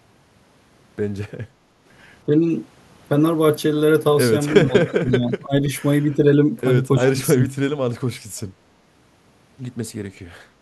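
From 1.53 to 1.84 s the room background dips by about 7 dB. This is background gated by the echo canceller, which clamps the microphone while the loudspeaker plays.

From 4.65 to 5.7 s, 6.06 to 6.34 s and 6.96 to 7.5 s, the talker's speech drops in pieces, by around 20 dB at worst and only slightly in the middle span. This is likely speech suppressed in double talk, with the canceller turning down both its own talker and the loudspeaker echo.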